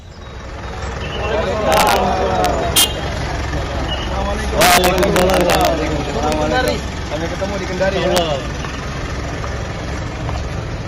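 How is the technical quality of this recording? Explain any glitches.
The recording is marred by integer overflow, occurring at 1.72 to 1.96 s, 2.45 to 2.84 s, 4.61 to 5.67 s, and in brief bursts at 6.32, 6.68 and 8.17 s. Loud passages pushed the sample values past the integer ceiling, by up to about 7 dB, and instead of being limited they wrapped to the opposite extreme. Each overshoot becomes a harsh crack, far sharper than clipping. The waveform shows peaks flipping across the full range, and a spectrogram shows bright vertical broadband streaks.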